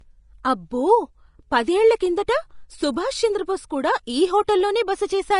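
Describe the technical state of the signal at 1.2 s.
At 1.2 s, as everywhere in this speech clip, the signal likely went through Vorbis compression at a low bitrate around 33 kbps. Nothing remains above 10.5 kHz, and the coarsely quantised treble below it turns to grainy hiss, roughening tones and blurring consonant attacks.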